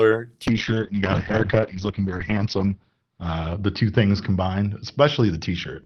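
At 0.49 s the speech loses its clarity and stays degraded to the end: a call bitrate drop, where the encoder was pushed from 32 kbps down to 7 kbps, sitting at the lowest rate for about 2.1 s. Coarser coding makes the speech rough and watery, and the audio band shrinks from 20 kHz to 6 kHz, muffling it. Unlike packet loss, there are no gaps or glitches, only a continuous loss of detail.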